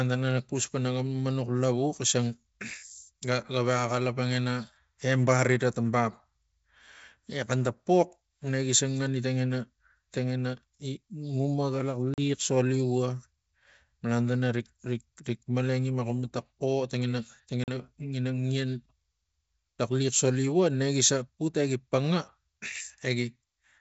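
At 12.14 to 12.20 s and again at 17.64 to 17.69 s, the speech drops out in packet loss on an ADPCM call, each time about 40 ms gone, roughly a couple of packets. The waveform shows a flat, hard-edged gap, and the spectrogram a clean vertical blank stripe across all bands. Because the decoder's predictor and step size lose track of the sender's, the speech comes back slightly distorted before settling within tens of milliseconds.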